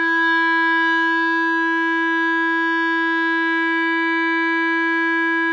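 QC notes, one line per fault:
No faults heard in the music on this pass; nothing to log.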